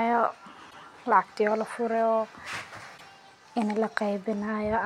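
At 0.69 s, just before "lacagtii walaa", there's a stutter from repeated frames: a 52 ms block, probably two frames, plays twice, adding that much time. At 2.97 s a 78 ms block repeats the same way. Around 1.97 to 2.03 s there's a short GSM phone buzz, a raspy 217 Hz burst about 25 dB under the speech, like a nearby phone briefly sending data.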